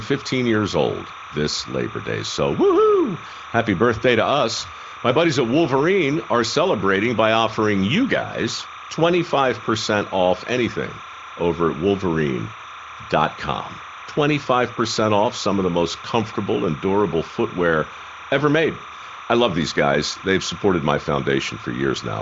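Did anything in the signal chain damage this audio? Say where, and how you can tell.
Yes, timecode bleed in the analogue wiring: linear timecode at 30 frames per second leaks from a neighbouring cable into the speech path. Throughout, a steady chirping warble alternating around 1 and 2 kHz sits roughly 15 dB below the speech, beneath the wideband HD Voice coding.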